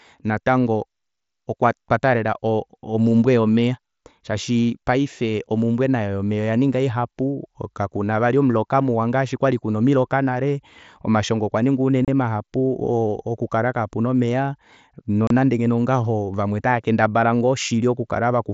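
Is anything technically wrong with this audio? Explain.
Yes. Two brief dropouts break the speech: abrupt 30 ms holes with hard edges, at 12.05 to 12.08 s, just after "omiloka nale omashongo okwaninga", and again at 15.27 to 15.31 s. This is unconcealed Bluetooth headset packet loss on the mSBC headset link. Short voice packets between headset and phone never arrived, which fits roughly four consecutive frames, and nothing filled the gap.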